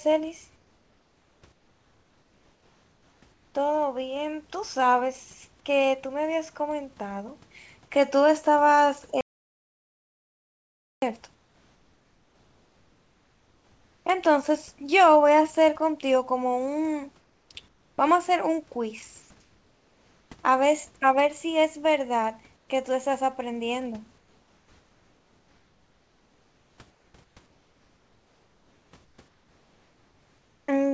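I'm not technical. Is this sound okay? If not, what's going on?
No. Comfort noise in place of the background appears at 0.56–3.54 s, 11.34–14.06 s, 17.20–17.98 s, 19.22–20.30 s, 22.56–22.68 s and 24.18–30.68 s. In these pauses the real room sound gives way to a flat hiss, slightly quieter at 11.34 s and 22.56 s, likely because the calling system stopped sending audio when nobody spoke and the receiving end filled the gap with made-up noise.

An audio dropout to silence runs from 9.21 to 11.02 s. The sound cuts to total silence, with not even the room's background left, and anything said then is lost, likely because the input connection briefly failed while recording carried on.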